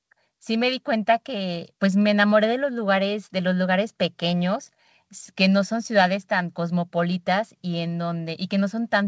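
No faults detected; the speech carries the expected wideband call-codec character, with nothing above 8 kHz, consistent with a G.722 path.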